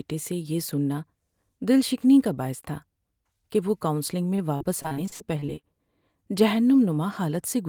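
From 4.35 to 5.65 s, just after "کہ وہ کاونسلنگ", the speech suffers repeated packet loss (robotic sound). Audio data kept failing to arrive in time, and each hole was filled by extending the sound that came before it. The sound points to about a dozen dropouts, the longest 62 ms, patched over roughly 300 ms in total, nearly a quarter of the stretch. The result is choppy, robotic speech with small pieces missing.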